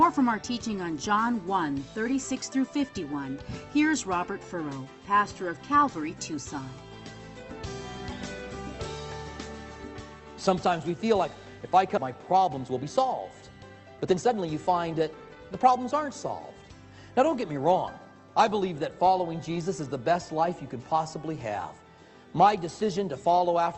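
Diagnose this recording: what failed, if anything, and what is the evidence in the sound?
Skip ahead in the jitter buffer, 11.97 to 12.08 s. About a second of audio is missing. Playback jumps forward with almost no gap, dropping queued audio.

Jitter buffer speed-up at 12.54 to 12.97 s (112%) and 13.62 to 15.59 s (121%). Pitch periods are cut, so the audio runs fast at unchanged pitch.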